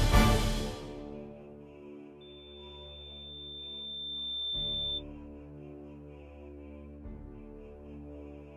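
From 2.21 to 5.04 s there's loudspeaker feedback squeal: a 3.6 kHz tone swells over roughly two seconds to about the programme's level as the mic-speaker loop runs away.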